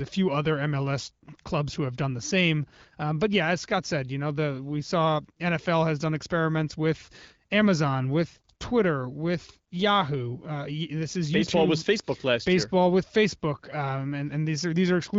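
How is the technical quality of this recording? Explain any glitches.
The speech passes through the AMR wideband (HD Voice) codec at 15.85 kbit/s with only light coding damage, and no glitches occur anywhere in the recording.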